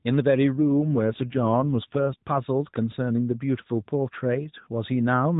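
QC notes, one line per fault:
0.59 to 2.22 s, AMR rate drop: the speech turns rougher and buzzier, with no gap and the same narrowband cutoff, then returns to the lightly coloured AMR-NB sound. A weak link made the codec trade bits for protection, which fits a drop from 12.2 to 5.9 kbps.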